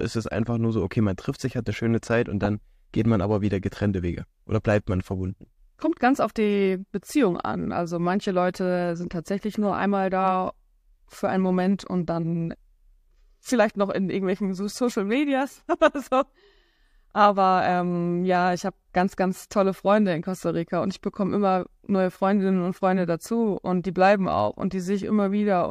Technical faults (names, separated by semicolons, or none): corrupt frame decoded